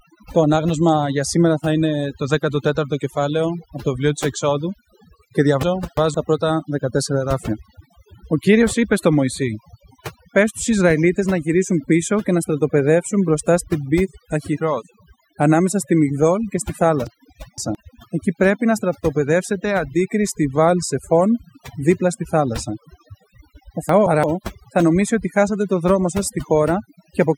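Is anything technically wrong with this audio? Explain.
Yes. Overdone noise removal runs throughout: band-by-band suppression set too hard leaves near-silent gaps with twinkling specks and a spectrogram full of isolated blobs.

Chunks out of order occur at 5.63 to 6.14 s, 17.07 to 17.75 s after "και στη", and 23.89 to 24.24 s before "θα νομίσει ότι χάσατε". A late segment plays after the ones meant to follow it, which fits chunks of about 171 ms. The result is jumbled speech, and the waveform shows three abrupt discontinuities in each passage.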